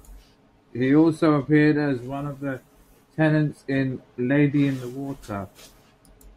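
No audible technical faults.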